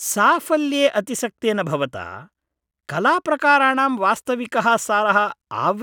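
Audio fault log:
No fault can be heard anywhere in this speech recording. Nothing in the audio calls for a timed entry.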